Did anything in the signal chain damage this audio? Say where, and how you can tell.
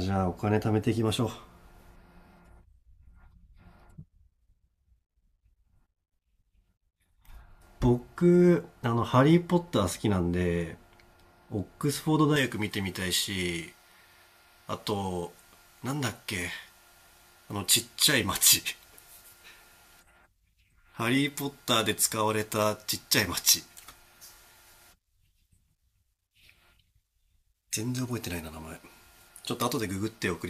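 Yes. Pre-emphasis left on from 12.36 s to the end of the speech. This is a transmission or decoding stage fault: the treble boost applied before the link was never undone by the matching de-emphasis at the receiving end. From 12.36 s onward the sound turns abruptly thin, bright and sibilant, with the 10 kHz region about 11 dB hotter relative to 1 kHz, a tilt that fits an uncorrected J.17-style emphasis curve.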